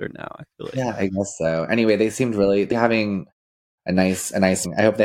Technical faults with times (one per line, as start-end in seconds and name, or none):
4.64 compressed frames skipped